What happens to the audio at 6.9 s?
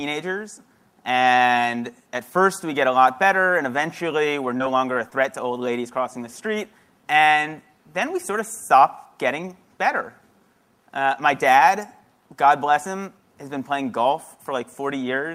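Nothing goes wrong at 6.9 s; the audio runs through that moment intact, with no dropout, click, glitch or other fault.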